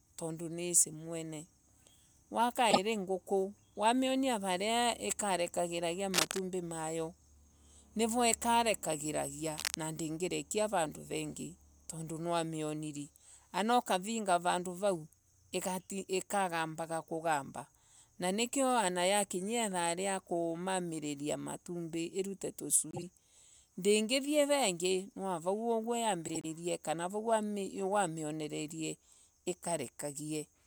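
At 2.71 s a brief garbled flutter marks frames out of order: two adjacent 24 ms blocks of the speech were decoded swapped. At 6.14 to 6.40 s, and again at 9.58 to 9.75 s, uneven scratching bursts cut across the speech, first at roughly the speech's own level, then somewhat quieter. This cable scratch noise likely comes from a worn cable or connector being moved. The frames-out-of-order flutter returns at 22.91 to 23.03 s, with two 48 ms blocks exchanged, and at 26.28 to 26.45 s with 72 ms blocks, each longer.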